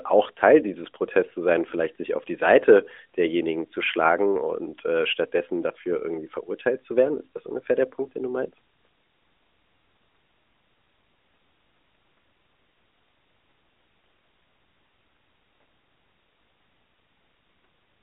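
The speech comes through the AMR narrowband mobile codec with its usual telephone band of about 200 Hz to 3.6 kHz and only light coding texture, and no technical fault can be heard anywhere in the clip.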